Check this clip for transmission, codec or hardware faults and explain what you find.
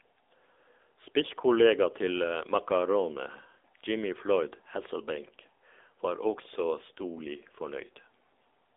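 One fault, and it runs the whole way through: AMR narrowband mobile codec coding. Nothing survives above 3.7 kHz, and the speech sits in a phone-line band of 300 Hz to 3.6 kHz. The codec rebuilds each 20 ms frame from a vocal-tract model driven by a handful of pulses. The damage fits a low AMR-NB mode near 8 kbps, leaving the speech plainly buzzy and synthetic.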